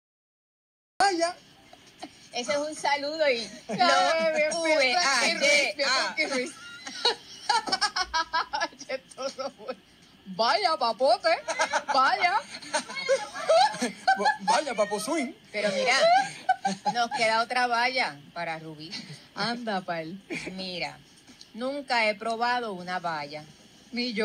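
For the first 1.00 s there is only digital silence, and at 1.00 s the sound starts abruptly in mid-event. This is a cut-off start: the capture or stream began after the source was already sounding, so the opening of the sound is missing rather than quiet. Unlike a slow fade-in or a gentle natural onset, there is no rising level or attack. Unlike a dropout, there is no earlier audio before the gap.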